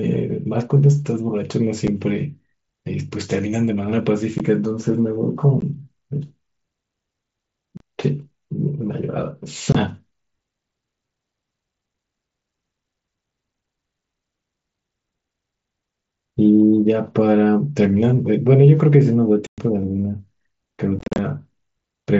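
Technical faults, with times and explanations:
1.87, 4.38, 5.61, 7.77–7.81, 9.72–9.75, 19.47–19.58 and 20.99–21.19 s: unconcealed Bluetooth headset packet loss. Headset voice packets never arrived, and nothing filled them. Short holes result, up to 112.5 ms long, with abrupt edges. The last stretch is scattered and sounds like crackle.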